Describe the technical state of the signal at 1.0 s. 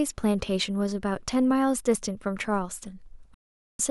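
At 1.0 s the speech signal is intact, with no dropout, distortion, glitch or other fault audible at that moment.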